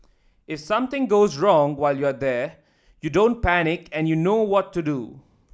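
No technical faults can be heard in this recording.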